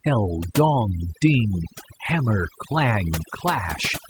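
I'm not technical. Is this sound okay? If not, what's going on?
No. From start to end, the speech has overdone noise removal. A clean-up tool set far too strong silences slices of sound it mistakes for background hiss, taking quiet parts of the voice too. Pauses become near silence with faint twinkling specks.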